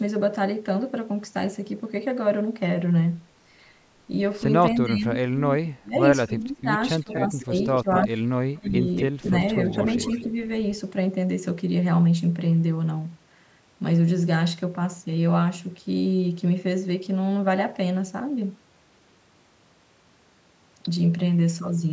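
From 4.76 to 6.69 s and again 7.01 to 8.76 s the speech dips by roughly 25 to 30 dB in pieces, likely speech suppressed in double talk, with a brief 20 dB dip at 9.19 s. Overlapping that, likely echo leak brings back a quieter copy delayed 238 ms at 7.11–7.44, 7.82–8.07, 8.64–9.26 and 9.62–10.27 s.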